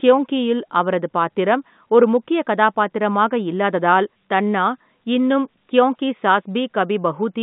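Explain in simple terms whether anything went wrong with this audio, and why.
Nothing went wrong: the speech has the narrow, slightly thin sound of an ordinary landline call, because the G.711 telephone coding used here keeps only the middle range of pitches. That is the phone system working as designed.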